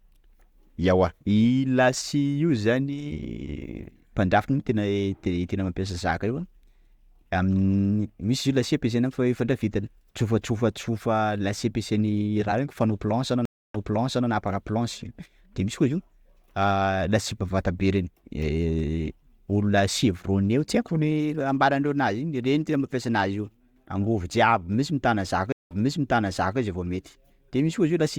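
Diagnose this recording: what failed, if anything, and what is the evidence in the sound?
Stream reconnect at the network stage: the connection dropped, and a new decoder restarted from a resent burst. After "planche anao" (13.45 s), 290 ms of silence is followed by speech replayed from 0.56 s earlier. After "mitana zaka" (25.52 s), 184 ms of silence is followed by a replay from 0.88 s earlier.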